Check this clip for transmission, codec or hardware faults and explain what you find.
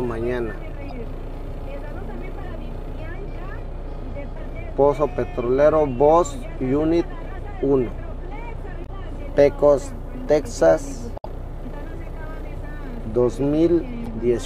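The compressed stream carries damaged data in five places: 0.88–0.93 s, 4.33–4.37 s, 8.82–8.89 s, 11.15–11.26 s and 14.03–14.07 s. At each point the bytes reaching the decoder are corrupt, so it misreads or rejects those frames and loses sync until it finds a valid frame header again. Each event is a short chirp, squawk, click or hole of 40 to 110 ms, with the longest at 11.15 s.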